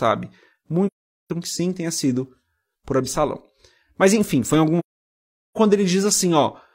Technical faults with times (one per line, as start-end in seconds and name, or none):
0.87-1.30 AAC frame loss with muting
4.79-5.58 AAC frame loss with muting